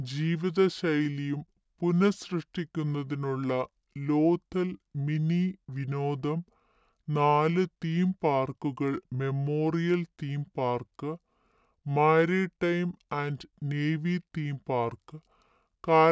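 From start to finish the speech sounds slow and low, with the voice dragged down by about 7 semitones and running at two-thirds of its proper speed. This is a wrong sample rate: the audio was played back without conversion, which fits 24 kHz material read out at 16 kHz.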